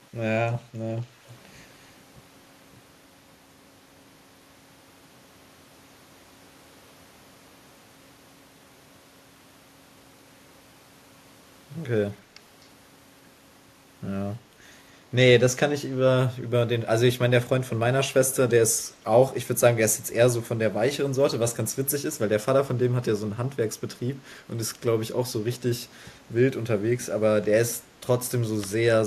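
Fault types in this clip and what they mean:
Echo leak: a brief, faint copy of the speech returns 255 ms late at 1.27–1.33 s, a distinct repeat rather than reverb's smear, likely from uncancelled loudspeaker pickup.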